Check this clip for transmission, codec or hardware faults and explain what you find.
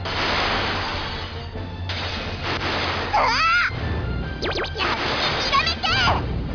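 Aliasing runs through the whole clip. The high end sounds gritty and metallic, with hissy, brittle tones that don't belong to the sound, and the spectrum runs up hard against a ceiling near 5.5 kHz. This happens when a sample rate is cut without a proper low-pass filter first. Here the drop fits a conversion from 44.1 kHz to 11 kHz, so content above 5.5 kHz folds back down to unrelated frequencies, at a level roughly 10 dB below the signal.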